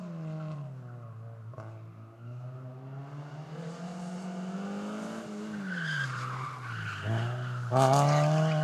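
Nothing goes wrong anywhere in these sounds, so there's no fault to point to at any moment.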